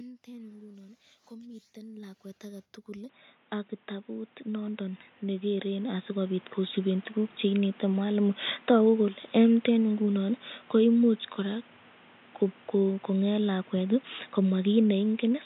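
A speech clip with two faults. From 0.24 to 2.78 s, automatic gain rising: the gain control judged the input too quiet and raised its gain steadily by about 8 dB, so the voice and the room behind it swell together over that stretch instead of holding a steady level. At 3.09 s, with no gap, the sound turns dull and boxy for the rest of the clip, with nothing above 3.8 kHz. It also jumps in level by around 5 dB and gains a new noise floor roughly 30 dB under the voice. The likely cause is the input switched to a poorer device, such as a second microphone or a headset in its call profile, which passes a much narrower band and brings its own tone and background noise. Automatic gain rising happens again from 3.87 to 7.03 s, this time by about 12 dB, as the gain control pushes both the narrowed voice and its added noise up together.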